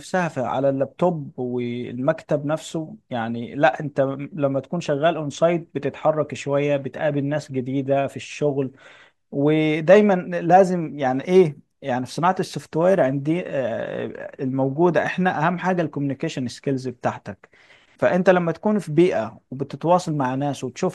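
No technical faults are audible anywhere in the recording.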